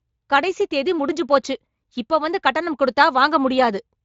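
No audible technical faults here.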